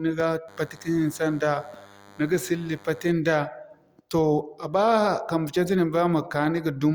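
From 0.48 to 3.12 s, a DECT cordless phone buzz sits under the speech. Radio bursts every 10 ms get rectified, producing a thin 100 Hz buzz, fairly quiet.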